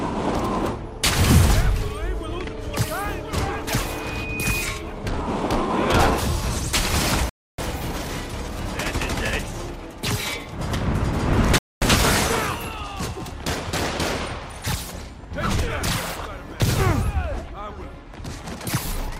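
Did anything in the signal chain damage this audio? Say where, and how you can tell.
Yes. At 3.84 s a loudspeaker feedback squeal starts at the acoustic stage, where the microphone picks up its own loudspeaker. A steady 2.5 kHz tone swells over roughly 0.7 s until it is about as loud as the sound itself, then stops at 4.71 s. On a spectrogram it is a single bright horizontal line at 2.5 kHz that thickens as it grows. In the waveform the envelope rises steadily. At that frequency the loop gain went above one, so the tone kept feeding itself until it stopped.

There are two rebuffering stalls at the network and playback stage. The audio drops to dead silence from 7.29 to 7.58 s, adding 290 ms, and again from 11.58 to 11.82 s, adding 235 ms. Each time it picks up exactly where it left off. The waveform shows a flat silent gap, and the spectrogram shows a clean vertical blank band with no missing material on either side. 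The player ran out of downloaded data and waited for more, so the clip gained time but lost none of its content.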